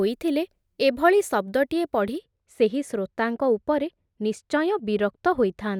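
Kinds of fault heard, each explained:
De-emphasis applied wrongly: a treble-reducing filter meant to reverse pre-emphasis has acted on speech that never received that boost, or has been applied twice, so the high end is cut rather than restored. From 2.18 s to the end, the speech turns dull and muffled, with consonant detail softened. On a spectrogram, energy above 1 kHz fades progressively, sitting about 10 dB lower at 10 kHz than at 1 kHz, while the waveform looks smoother with fewer sharp transients.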